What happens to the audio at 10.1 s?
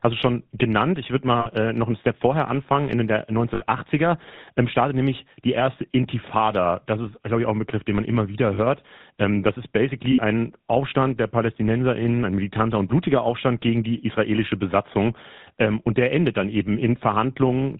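Lost GSM frames from 10.12 to 10.19 s: the decoder repeats the last good frame, giving a brief rough, metallic ring instead of a silent gap or click. The span fits about three 20 ms frames. Underneath, the GSM full-rate codec's buzzy roughness and missing top above 4 kHz continue throughout.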